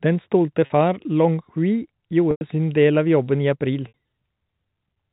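Packets dropped out at 0.66 s for 40 ms, 2.31 s for 100 ms and 3.88 s for 60 ms, and the receiver bridged each gap by repeating the last pitch period. This is packet loss with pitch repetition. The shorter gaps sound like a briefly held, buzzy tone. The 100 ms gap fades toward silence before the speech cross-fades back.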